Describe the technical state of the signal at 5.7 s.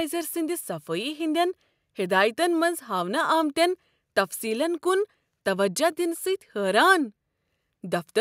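At 5.7 s the speech signal is intact, with no audible technical fault at that moment.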